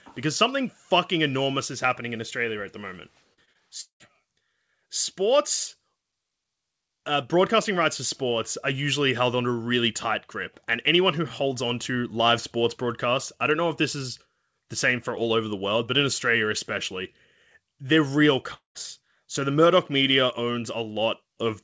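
From 3.34 to 4.02 s there's a burst of repeated packet loss, and you get that choppy sound. Four separate holes open up, the longest 191 ms, and each one gets patched by stretching the last bit of sound. That's why about 39% of that stretch is patched over rather than real audio.

Then at 18.54 s the sound goes to a fading buzz or hiss and drops to silence for about 0.14 s before it comes back at 18.77 s with a chunk missing. That's likely a long network dropout. The receiver kept the last sound going briefly, then gave up. Across the whole clip nothing sits above 8 kHz, which fits a G.722 call codec.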